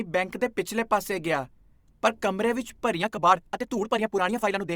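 A time-stretched section runs from 2.96 s to the end, right after "ਗਿਆ ਪਰ ਕਮਰੇ ਵਿੱਚ". The speech suddenly races at about 1.66 times its pace while pitch holds steady, sounding rushed, likely because software squeezed it by dropping short slices.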